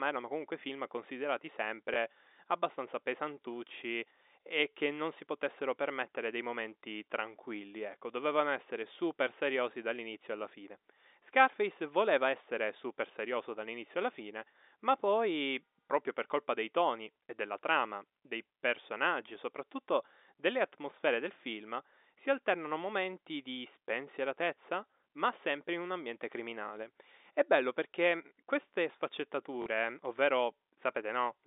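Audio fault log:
1.94–1.96 s and 29.62–29.66 s, packet loss with last packet repeated: speech data went missing on the telephone link, and the receiver filled each gap by replaying the last packet it had. The first gap is 20 ms, between "erano comunque film considerati" and "abbastanza pesantucci e che", which fits one lost 20 ms packet. The second is 40 ms, which points to two in a row. Each replay restarts out of step with the voice's pitch. The longer repeat buzzes briefly at the 50 Hz packet rate, a short robotic stutter on the narrow 250 Hz to 3.7 kHz line.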